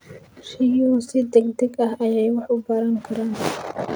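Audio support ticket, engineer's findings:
No audible fault found on listening; capture and playback path show no defect across the speech clip, no action required.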